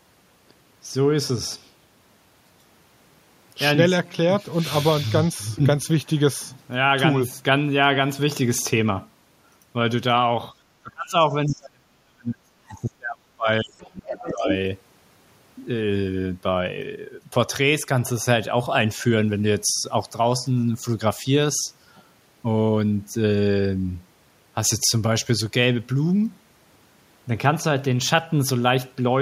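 From 10.83 to 14.48 s the speech is suppressed in double talk. The talker's level sinks repeatedly, by as much as about 35 dB, for roughly three seconds in total. The likely cause is an echo canceller that could not separate the talker from loudspeaker echo while both spoke, and so pulled everything down.

Inside that stretch, at 11.47 to 11.55 s, the other side's voice leaks through. It is a brief, faint scrap, about 25 dB under the speech. It returns from 14.12 to 14.53 s, much louder, about 10 dB under. Incomplete echo removal is the likely cause.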